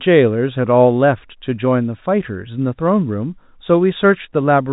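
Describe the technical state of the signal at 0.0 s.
At 0.0 s the speech is intact, with no fault present, only the narrow telephone band of G.711 A-law coding that leaves nothing above about 3.8 kHz.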